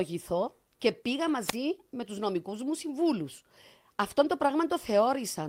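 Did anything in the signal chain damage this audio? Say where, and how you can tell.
Yes. A lost packet rebuilt from error correction sits at 1.27 to 1.29 s, in the network and codec stage. For 20 ms the speech turns rougher and noisier with no gap, which fits one lost packet whose low-bitrate copy, carried in the next packet, the decoder played in its place.

A wireless microphone squelch dropout follows from 1.43 to 1.56 s, in the analogue radio link ahead of the chain. Hiss rises as the FM signal fades, then the receiver's squelch mutes the output for about 32 ms before the speech returns.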